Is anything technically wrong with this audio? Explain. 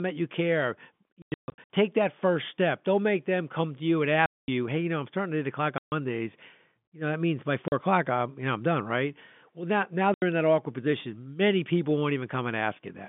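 Yes, there's packet loss filled with silence. Packets went missing and the receiver just played nothing in their place, so the sound drops out with hard edges. The dropouts land in chunks that fit 20 ms packets. From 1.22 to 1.7 s it's a scattered run of holes, the longest about 140 ms. There are cleaner gaps at 4.26–4.48 s after "come to you and", 5.78–5.92 s after "starting at eight o'clock", and 7.68–7.72 s. The last is at 10.14–10.22 s, between "now now" and "in that awkward position". It all sits on a narrowband telephone line.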